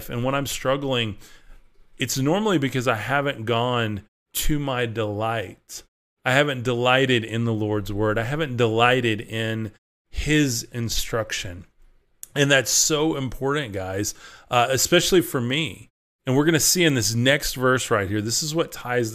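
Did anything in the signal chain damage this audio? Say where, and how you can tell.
No, there's no damage anywhere in the chain: the background just drops to silence in the pauses of the speech and comes back in time for each phrase, which is the noise gating doing its job and losing only very quiet sound.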